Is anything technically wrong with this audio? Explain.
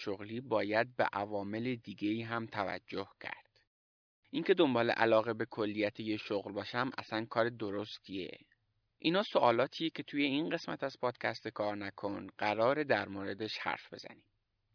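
No, nothing technically wrong turns up anywhere in this speech recording, so there's nothing here to flag.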